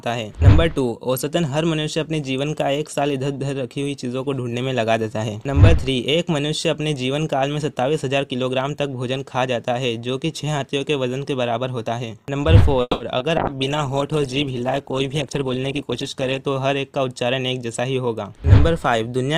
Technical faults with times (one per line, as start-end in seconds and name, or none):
12.81-13.02 call audio freeze
13.18-13.24 short concealed packet loss
13.39-16.50 call bitrate drop
15.29-16.45 jitter buffer speed-up